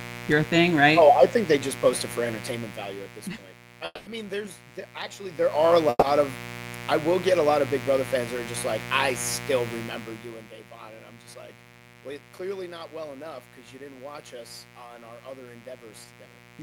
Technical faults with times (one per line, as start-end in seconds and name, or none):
0.00-16.62 mains buzz
3.85-4.08 call audio freeze
5.89-6.04 call audio freeze
9.74-10.55 zipper noise
11.27-12.39 jitter buffer speed-up